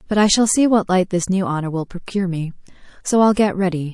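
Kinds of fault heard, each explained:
MP3 compression: Throughout the speech there is plainly audible codec damage: a watery, swirling texture and a metallic chirp on s sounds where faint high-frequency detail flickers in and out between frames. The cause is likely low-bitrate MP3 encoding, around 48 kbps, starving the quieter frequency lines of bits. Unlike broadband noise or a plain low-pass filter, the damage shifts constantly with the signal.
Pre-echo: At about 3.34 to 3.37 s, roughly 32 ms of hiss, about 12 dB above the surrounding floor, comes just before a sharp attack, which then sounds softened. The encoder spread quantisation noise meant for the loud onset across the whole block, including the quiet moment before it. The spread fits a block of about 48 ms and points to the encoder never switching to short blocks. Unlike a click or dropout, the hiss always comes just ahead of the onset.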